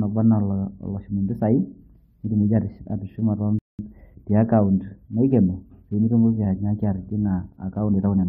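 At 3.59 s the player runs short of downloaded data and halts playback until more arrives, a rebuffering stall. The speech cuts to silence for 200 ms, ending at 3.79 s, then picks up exactly where it stopped, so nothing is lost but the pause lengthens the timeline.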